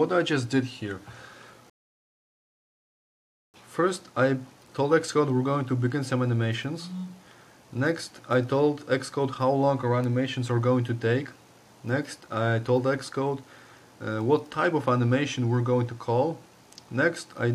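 At 1.70 s the sound drops to silence and picks up at 3.54 s exactly where it left off, with nothing skipped. This is a rebuffering stall: the player exhausted its downloaded audio and paused until more arrived, inserting about 1.84 s of dead air.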